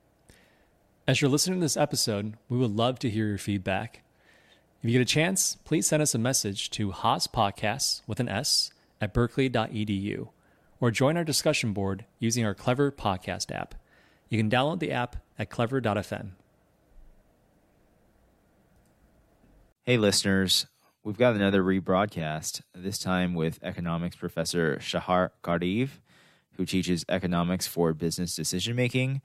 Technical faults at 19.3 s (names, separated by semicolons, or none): none